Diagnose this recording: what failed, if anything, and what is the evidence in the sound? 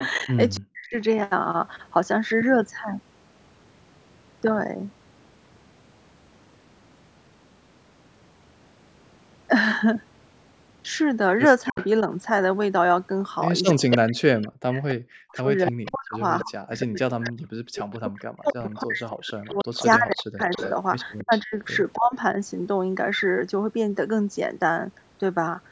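Echo leak, at the call-processing stage: a delayed copy of the far side's speech comes back at 0.0 to 0.59 s, 11.65 to 11.86 s and throughout 13.91 to 22.16 s, trailing by 281 ms. It sits about 15 dB below the speech at first and rises to roughly 10 dB below in the long stretch. The likely cause is an echo canceller that left part of the loudspeaker pickup in the microphone signal. On a spectrogram, harmonic patterns repeat 281 ms later at lower intensity, and the waveform shows faint shadow envelopes.

Speech suppressed in double talk, also in call processing: the talker's level collapses from 0.27 to 0.96 s, from 11.69 to 12.09 s and over 13.73 to 22.37 s. The gaps total roughly 0.4 s, 0.1 s and 5 s, with drops of about 40 dB at the deepest. The likely mechanism is a canceller that couldn't separate near speech from echo and attenuated both. On the waveform this appears as chopped, near-silent notches, and on the spectrogram as vertical gaps across the band up to 8 kHz.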